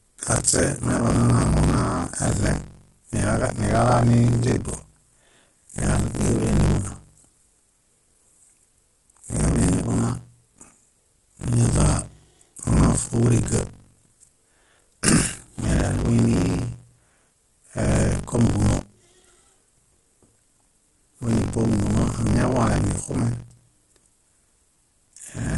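Buffer tearing runs through the whole speech clip, heard as a steady robotic buzz at 46.9 Hz that sounds only while there is signal. That rate fits a 1024-sample buffer where writer and reader cross every period, so roughly 40 percent of each buffer replays audio about 40 ms old, with hard joins on both sides. Low-delay AAC compression, likely AAC-ELD, is also present throughout: the voice is plainly rough and grainy, with noise filling the gaps between harmonics and nothing above 11.6 kHz. This points to a low bitrate of around 32 kbps, where short frames resolve pitch poorly.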